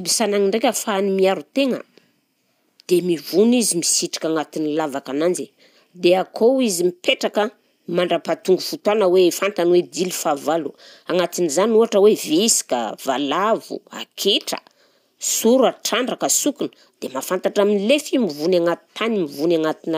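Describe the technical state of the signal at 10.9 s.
No fault is audible at 10.9 s, and the signal is intact at that point in the speech.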